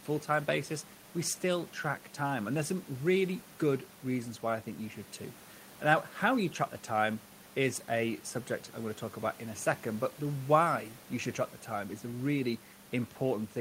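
No technical faults can be heard in the speech, and the only other sound is the room's own background noise, sitting about 25 dB below the voice as part of the recording itself.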